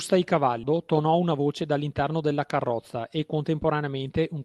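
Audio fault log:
0.63–0.74 s, skip ahead: playback jumps forward with almost no gap, so roughly 0.7 s of speech is simply absent and the audio on either side is butted together. The jump points to a jitter buffer that was holding a backlog and discarded a stretch of already-waiting audio to bring its delay down by about the same amount, leaving only a brief splice of around 12 ms at the seam.
1.20–2.04 s, jitter buffer speed-up: the speech runs about 6% fast over this span while its pitch stays where it was, giving a slightly hurried, clipped delivery. The receiver had more audio queued than it wanted and trimmed it by repeatedly cutting out short pieces one or a few pitch periods long, taking out something under a tenth of a second in total. Because whole periods are removed, the tempo rises without any chipmunk shift. The Opus call path underneath carries its usual coding noise with the top end limited to 12 kHz.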